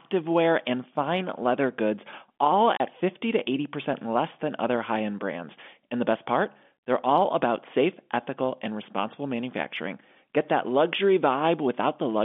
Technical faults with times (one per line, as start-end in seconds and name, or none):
2.77-2.80 packet loss filled with silence